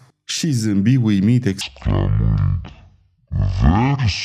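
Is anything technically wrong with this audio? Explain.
Yes. From 1.61 s, right after "zâmbi uimit", to the end, there is a section at the wrong speed. It plays at about 0.52 times normal rate, likely from being clocked wrongly on playback, so the speech drops roughly ten semitones and drags. On a spectrogram, the harmonics sink lower and every feature stretches to nearly twice its width.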